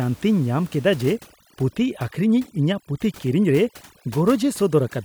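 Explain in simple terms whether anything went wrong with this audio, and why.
From 1.01 s to the end, there is overdone noise removal. A noise reduction tool was set too strong. It shut off parts of the sound close to the room noise. The background drops and breaks up into twinkling specks.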